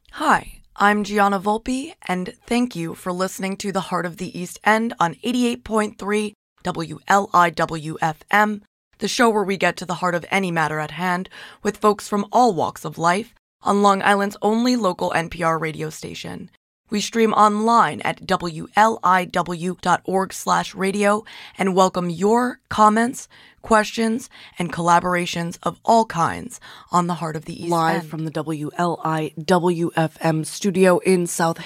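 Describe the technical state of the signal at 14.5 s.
At 14.5 s the speech signal is intact, with no audible dropout, clipping, distortion or other technical fault.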